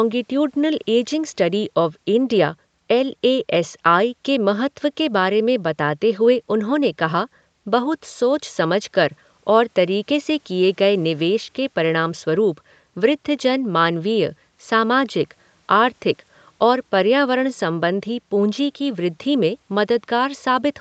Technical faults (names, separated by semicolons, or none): none